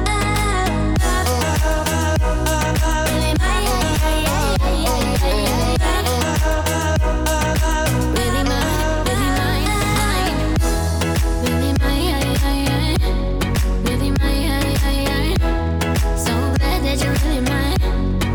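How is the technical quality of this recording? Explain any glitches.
There is one glitch, a single sharp click at 0.53 s. It is very brief, a thin tick with no gap or dropout around it, and would show as a narrow vertical line running up the spectrum. The likely cause is dropped samples: a fraction of a millisecond of the stream went missing, so the waveform leapt straight from one value to a later one. That abrupt step is far too short to remove any audible sound, but it is enough to produce the click.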